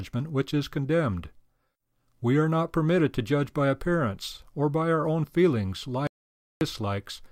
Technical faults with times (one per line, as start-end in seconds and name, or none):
6.07-6.61 audio dropout to silence